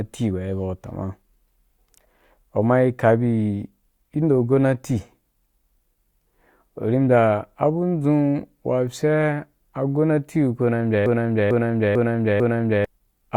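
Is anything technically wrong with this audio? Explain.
Yes. From 11.06 to 12.85 s the speech falls into a broken-record loop: one 446 ms fragment plays four times back to back, likely because the player or stream stalled and kept resending its last buffer. The words that belonged there are lost. On a spectrogram or waveform, identical blocks repeat at exact 0.45 s intervals.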